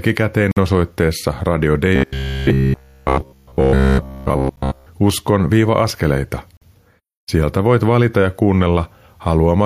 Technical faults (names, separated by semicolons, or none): gap between stream segments; robotic sound from repeated short buffers